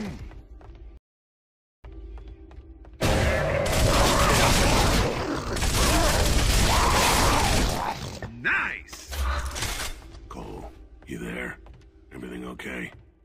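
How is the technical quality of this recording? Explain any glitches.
One glitch stands out: a rebuffering stall early in the recording. From 0.97 s to 1.84 s the sound cuts to silence for about 0.87 s, then picks up exactly where it broke off. The player ran out of downloaded audio and paused until more data arrived, so time is added but nothing is skipped. That sets it apart from a dropout or packet loss, where material vanishes and the audio jumps ahead.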